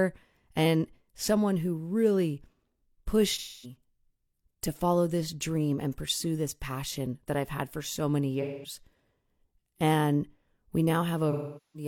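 AAC frame loss with concealment occurs three times in this speech: 3.33 to 3.76 s, 8.41 to 8.76 s, and 11.31 s to the end. The decoder rebuilds each gap of roughly 256, 213 and 427 ms from the last good spectrum, so the speech turns into a smeared, noisy wash.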